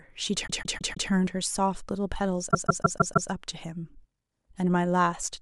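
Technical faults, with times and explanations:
0.46–1.09 s and 2.50–3.28 s, repeated frames: the same 157 ms block replays four, then five extra times, causing stutters seen as identical tiled segments on a spectrogram.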